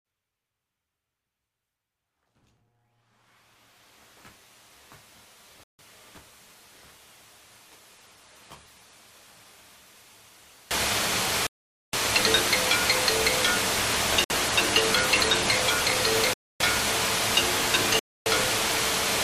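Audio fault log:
Throughout: block size mismatch (truncated). A steady 100 Hz buzz runs under the whole recording, and events play about 1.16 times too fast while staying near their natural pitch. The end of every block is being dropped, which fits 512-sample blocks written into a shorter read. Plain speed-up would raise the pitch instead.
0.00–10.71 s: one channel inverted. Heard in mono, the sound falls by about 28 dB and leaves a faint residue. It recovers fully at 10.71 s. The likely cause is one channel with reversed polarity cancelling the shared centre. A gain fault would keep the tonal balance, but this removes the centre content.
5.63 s (179 ms), 11.47 s (540 ms), 14.24 s (66 ms), 16.34 s (312 ms), 17.99 s (312 ms): Bluetooth stall. Playback cuts to complete silence, then picks up where it stopped or slightly later. This is likely a wireless buffer running dry while resent packets arrived.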